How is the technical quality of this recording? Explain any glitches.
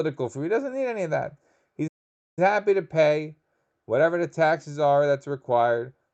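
The recording has audible timing problems: a faint, uneven wobble in pace running through nearly the whole clip, and one clear dropout where the sound cuts out for about half a second. Both come from delivery over a call link, where the audio passed through an Opus codec whose upper limit sits around 8 kHz.

Clock drift between sender and receiver affects the entire clip. The pace never feels quite settled, as if the flow catches slightly every so often. The cause is that the sending device's audio clock runs about 2% slower than the receiving device's. The receiver consumes samples faster than they arrive, so its jitter buffer keeps running low and must be refilled by stretching the audio.

Repeated timing corrections are the audible result, running from 0.39 s to the end at 6.13 s. The speech plays at about 98% of its natural rate overall. The receiver achieves this by repeating short slivers of audio at irregular intervals, always in the same direction. 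Each repeat is tiny, so rather than distinct glitches you hear small hiccups and a slightly dragging, uneven rhythm.

A playback stall occurs from 1.87 s to 2.39 s. The speech stops mid-flow and the output goes completely silent for roughly 0.49 s before resuming. The likely cause is that the player's buffer ran dry, a deeper version of the same starvation the slow sender creates, or that the playback thread was briefly blocked. Either way, no audio reached the output until data was available again.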